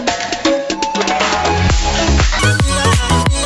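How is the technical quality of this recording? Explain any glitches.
The recording has one clear glitch, a wrong sample rate over the last stretch, from 2.39 s to the end at 3.46 s. There the audio runs 1.5 times too fast and its pitch rises by about 7 semitones, which fits material captured at 16 kHz being played back at 24 kHz without any resampling. Because each sample is simply clocked out sooner, timing and pitch shift together, so the sound turns high and hurried. On a spectrogram, every harmonic and formant band jumps upward by the factor 1.5 at 2.39 s, and events crowd closer together in time. In the waveform, cycles and envelopes visibly compress from that point to the end.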